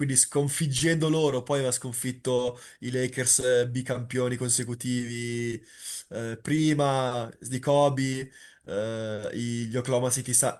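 At 4.63 s, a single sharp snap sits on top of the speech. It is an electrical switching spike, peaking fairly low at roughly -30 dBFS. It is likely caused by a nearby switch, motor or static discharge arcing briefly and coupling into the audio line.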